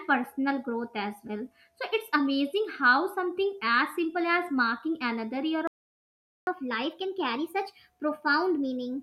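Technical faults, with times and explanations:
5.67 to 6.47 s: playback stall. The speech stops dead in mid-flow. The output is silent for about 0.8 s. The likely cause is the player running out of data or its thread being blocked.
6.47 to 9.03 s: catch-up at higher speed. Right after the gap, the speech runs 1.1 times faster until the end. Pitch rises with it, by roughly one and a half semitones. The player is resampling its backlog to win back the lost time.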